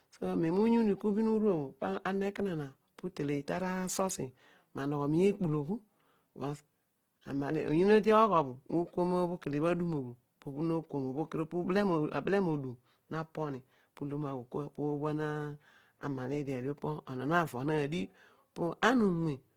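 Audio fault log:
Throughout: Opus compression. The speech has a grainy, rough texture, with tones and voiced sounds turned noisy rather than clean. The damage is plainly audible. The full band is kept, with content reaching about 20.2 kHz, so nothing sounds muffled. The grain comes from the music (CELT) mode at a low rate, likely near 16 kbps. It holds each band's energy but fills short bands with folded or noise content instead of exact detail.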